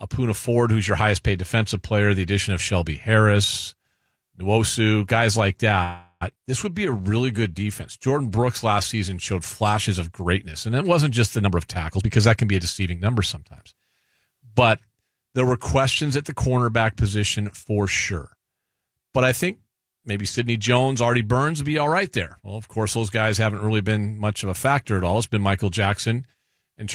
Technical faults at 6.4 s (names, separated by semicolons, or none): skip ahead